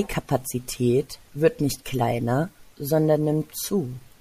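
No technical faults can be heard anywhere in the recording. Nothing in the signal path calls for comment at any moment.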